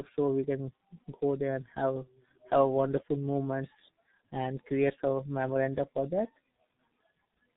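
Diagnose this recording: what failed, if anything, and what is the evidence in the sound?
The failure is at the codec stage: tandem speech coding, with two speech coders in series. The speech is rough, muffled and warbly throughout, with nothing above 3.8 kHz. That fits a CVSD link, via G.711 mu-law, feeding a low-rate G.723.1 coder, each re-encoding the last one's already degraded output.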